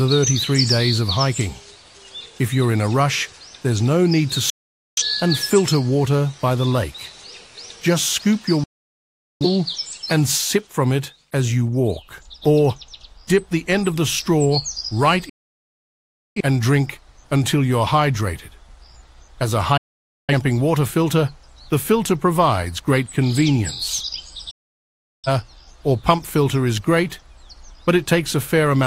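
Digital broadcast dropout: the audio cuts to silence within 3 ms at 4.50, 8.64, 15.29, 19.77 and 24.51 s, as failed frames are muted for 0.47 to 1.07 s each.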